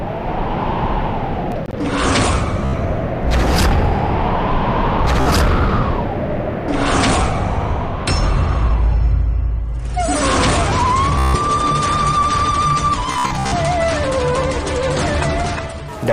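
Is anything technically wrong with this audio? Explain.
Yes, two problems. Around 1.52 to 1.73 s there's processor overload crackle: the machine couldn't finish its audio buffers on time, so a handful of short silent gaps, fitting buffers of roughly 10 ms, punch hard-edged holes in the sound, heard as a brief gritty crackle.

Then there's Bluetooth stutter at 2.65 to 2.74 s, 5.21 to 5.27 s, 11.19 to 11.36 s and 13.12 to 13.54 s. Late or lost packets made the receiver replay its last slice, giving a buzzy, machine-gun repeat covering about 76, 46 and 152 ms of lost audio. In the last one, losses are scattered over 0.4 s with a longest run of 61 ms.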